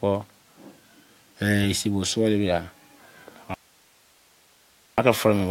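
At 3.54 s the speech breaks off abruptly in an audio dropout to a faint residue lasting about 1.44 s, until 4.98 s. The likely cause is a brief loss of the incoming signal while the path after the break stayed live, so the gap holds steady hiss roughly 35 dB below the speech rather than dead digital silence. The instant cut and return, with no tapering, set it apart from a natural pause or a fade.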